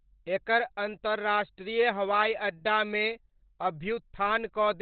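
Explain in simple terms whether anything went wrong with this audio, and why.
Throughout the speech, the sound is muffled, hoarse and thin, likely from heavy Opus compression squeezing it into a narrow, phone-like speech mode.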